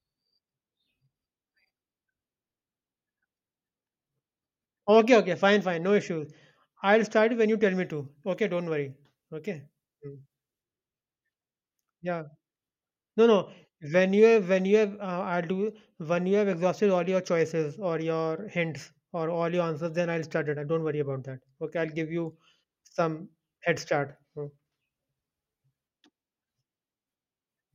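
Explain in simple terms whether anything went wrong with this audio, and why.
Something did go wrong, from about 7.84 to 10.63 s, right after "when you tell me." That stretch has pre-emphasis left on: the treble was boosted for recording and never turned back down, so the speech turns thin, bright and hissy on the s sounds.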